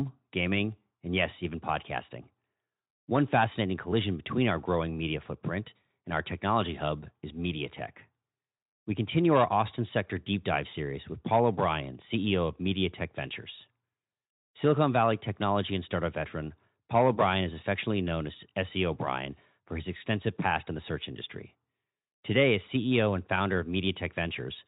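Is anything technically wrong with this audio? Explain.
Yes, there's VoIP packet loss concealed by the speech codec at 10.69 to 10.74 s, right after "sector deep dive". The decoder filled a gap that fits a single lost 20 ms frame by stretching the preceding sound, so you hear a brief buzzy or noisy smear before it recovers.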